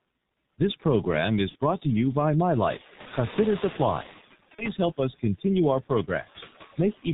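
Right from the start, the whole speech clip sits behind a noise suppressor, pulling the steady background down by about 14 dB. The noise ducks between phrases and swells under the voice.

Layered on that is the G.723.1 codec, and it's hitting hard. Nothing gets through above 4 kHz, so everything is muffled and hoarse, and consonants smear together. The coarseness fits a very low bitrate of around 6.3 kbit/s.

At 1.49 to 1.56 s there's VoIP packet loss concealed by the speech codec. About 60 ms goes missing, which fits two lost 30 ms frames. The decoder stretches the last sound out as it fades, and the voice stays weak for a moment afterward. It happens again at 4.55 to 4.69 s, with one 30 ms frame lost and the same stretched smear plus a short weak tail.

Around 2.5 s the room noise jumps by about 11 dB. That rise is the actual recording, not a fault. The noise suppressor catching up is the issue here. 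From 2.55 to 4.21 s its noise estimate lags, so the louder background leaks through with less reduction, about 11 dB, and then settles down over those 1.66 s.

Near the end, from 6.77 to 7.06 s, you get speech cut by the noise suppressor. It mistakes bits of the voice for noise and dips them, by as much as about 17 dB. Altogether roughly a tenth of a second sounds swallowed or faint.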